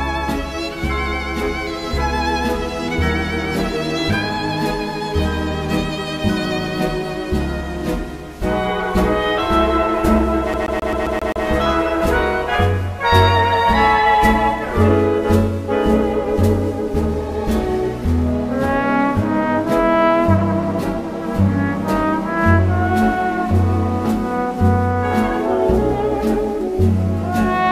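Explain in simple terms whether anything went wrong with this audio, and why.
From 10.53 to 11.46 s the CD gets stuck on one turn, replaying the same 0.13 s slice seven times. Unlike a dropout, the sound repeats evenly instead of vanishing.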